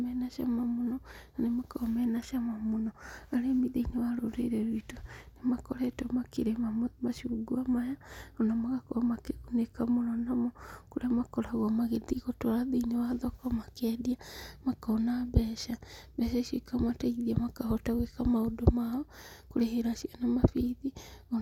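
Nothing in the speech stood out as a technical fault on listening.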